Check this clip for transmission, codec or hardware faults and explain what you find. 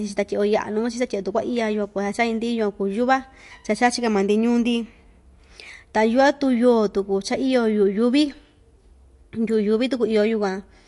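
One fault runs through the whole recording. MP3 compression, throughout: the speech has no content above 11.3 kHz, the encoder's treble cut-off, and weak frequency lines drop in and out between frames, which likely points to a low MP3 bitrate of roughly 50 kbps. The result is a plainly audible watery, swirling texture, with metallic chirps on s sounds and smeared consonant attacks.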